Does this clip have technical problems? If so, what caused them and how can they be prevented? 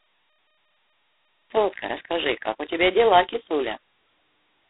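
Yes. Throughout, the sound carries G.726 ADPCM damage: a harsh, rasping hiss that rises and falls with the level of the speech, inside a telephone band of roughly 200 Hz to 3.7 kHz with nothing above 3.9 kHz. The coder sends only a small difference from its own prediction for each sample, and the roughness is heavy enough to point to the 16 kbit/s mode, where very few bits are left for each difference. Background noise or a dithered channel would hiss at a steady level, and a clean band limit would sound muffled without the grit, but here the hiss follows the speech itself. To prevent it, use 32 kbit/s or a wideband codec and avoid chaining low-rate links.

A cut-off start runs from 0.00 to 1.50 s: digital silence, then the speech appears abruptly at 1.50 s already partway through a sound, with no natural onset. The recording or stream began late and caught the talker mid-utterance. A fade-in would ramp up gradually, and a dropout would sit between stretches of sound, but this is digital silence at the very start followed by a hard entry. 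To prevent it, start capture before the talker begins or keep a short pre-roll buffer.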